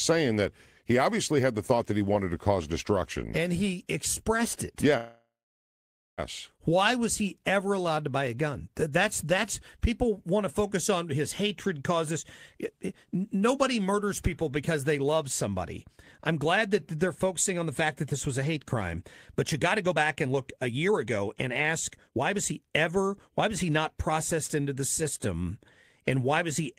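At 4.97 s, after "and he expressed it", a call audio freeze stretches the last sound into a fading buzz or hiss, then about 0.88 s of silence. It is likely a jitter buffer underrun: speech resumes where it stopped at 6.20 s, delayed rather than cut. From 12.58 s to 24.69 s, ending just before "the system", a jitter buffer speed-up removes pitch-period slices, running speech at 110% speed and dropping about a second in total. It sounds hurried while the pitch stays unchanged, unlike a resampling error.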